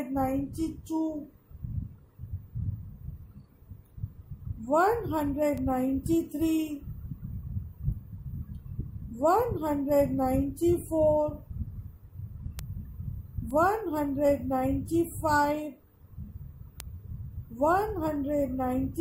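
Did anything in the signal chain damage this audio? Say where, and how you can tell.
Yes. Bit error spikes at 5.58, 12.59, 13.51 and 16.80 s are lone, broadband ticks peaking at about -20, -13, -26 and -7 dBFS, unrelated to the surrounding sound. Each fits one flipped bit in memory or a digital link, throwing one or two samples off by a power of two before they return.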